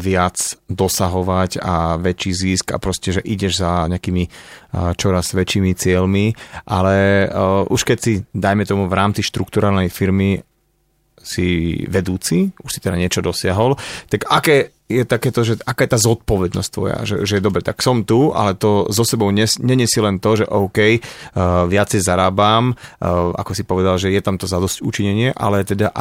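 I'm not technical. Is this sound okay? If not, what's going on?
Yes, nothing is wrong with this speech recording.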